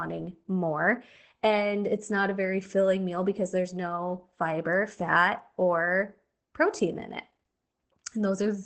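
Opus voice compression throughout: nothing above 8.5 kHz, and coarse linear-prediction coding, which fits about 12 kbps, leaves the speech muffled, hoarse and slightly robotic.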